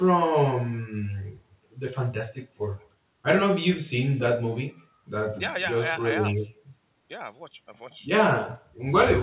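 Throughout, there is echo with no canceller. The far end's loudspeaker feeds its microphone, so each phrase returns about a fifth of a second later, faint, at about 27 dB down. The band stops at 4 kHz, which fits a narrowband telephone codec.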